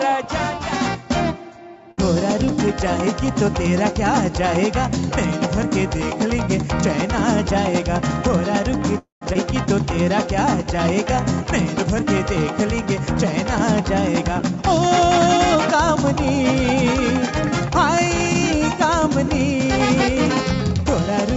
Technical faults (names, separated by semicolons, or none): short stall from a late packet; call audio freeze; skip ahead; jitter buffer slow-down; jitter buffer speed-up